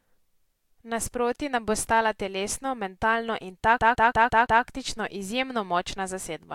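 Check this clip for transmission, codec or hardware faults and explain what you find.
One hardware fault stands out: the CD stuck on one turn. From 3.78 to 4.63 s, just after "stala telesno mentalno in" and before "izjemno močna", the speech stutters. A scratch keeps throwing the laser back a track, so the same 0.17 s slice replays five times with brief mutes at each jump. Unlike network loss concealment, the repeats are identical, evenly spaced and don't fade.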